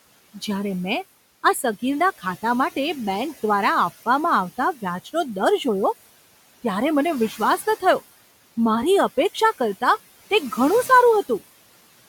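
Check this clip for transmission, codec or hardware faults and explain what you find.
One fault runs through the whole speech clip: noise suppressor artifacts. The suppressor estimates the steady background, here ordinary room noise sitting about 18 dB below the speech, and attenuates each frequency band it judges to be noise, frame by frame, cutting it by about 16 dB. When speech stops, the noise drops away. When speech resumes, it comes back up underneath, so the background pumps in step with the talking.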